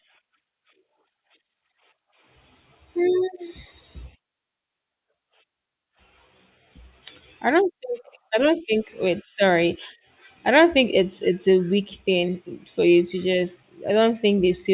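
No technical faults can be heard at any point in the speech, so there is nothing to describe in time order.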